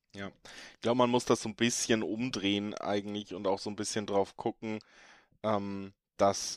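No technical faults can be heard at any point in this speech recording.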